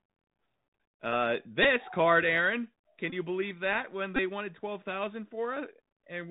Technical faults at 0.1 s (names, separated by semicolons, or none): Bluetooth CVSD headset codec